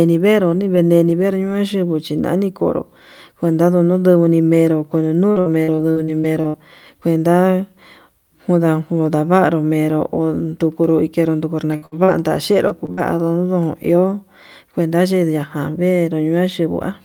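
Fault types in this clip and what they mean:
Repeated packet loss (robotic sound): audio packets kept going missing, and each hole was bridged by extending the preceding sound. From 5.31 to 6.66 s and 11.72 to 12.99 s the speech turns choppy, with holes up to 62 ms.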